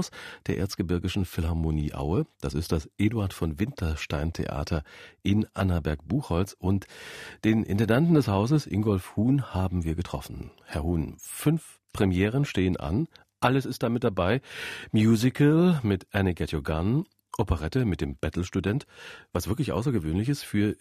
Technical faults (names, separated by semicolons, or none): none